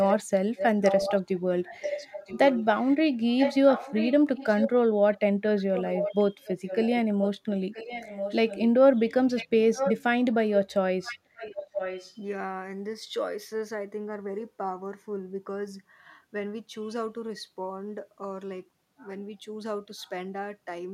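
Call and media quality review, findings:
Delayed second copy of the speech trailing by about 0.98 s: 0.00–5.18 s, 5.76–8.70 s, 9.36–9.94 s, 11.03–12.15 s, faint trace 20.00–20.10 s. Copy about 5 dB under direct speech in the first and third stretches, about 10 dB under in the second and fourth, barely audible (about 40 dB down) at the end. Echo leak, likely the far-end echo canceller failing to remove its loudspeaker's pickup, residue sent back.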